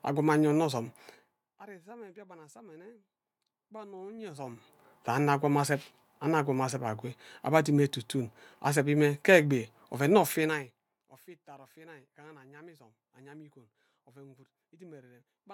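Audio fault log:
4.14–4.74 s, zipper noise: a level change of roughly 25 dB is applied in 2 dB jumps, around twenty a second, rather than as a continuous ramp. Each jump is a small instant discontinuity in the waveform, so the speech carries a rapid ticking, zipping texture for the six-tenths of a second the level is moving, stopping just before "sa anno akwam azeb".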